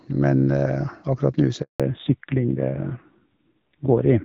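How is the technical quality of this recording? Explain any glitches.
The recording has two related glitches in the middle of a phone call. At 1.62 s there is a handover gap. The sound fades within milliseconds and stays silent for 180 ms, until 1.80 s. The call was passed between networks, and no frames arrived during the switch. From 1.80 s onward comes a fallback to narrowband. Before this, the light, clean HD Voice sound fits wideband coding near 12.65 kbit/s. Now nothing is left above 4 kHz. The speech turns duller and rougher, which points to a narrowband codec at about 5.9 kbit/s.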